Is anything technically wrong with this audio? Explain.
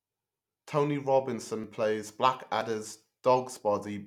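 Yes, there are two tiny skips in the speech at 1.64 s and 2.61 s, about 20 ms each. It's audio missing between chunks, likely lost as one 1-second chunk closed and the next opened, with the two sides butted together.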